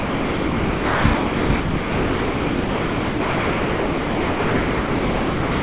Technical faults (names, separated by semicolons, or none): sound dropped by the voice detector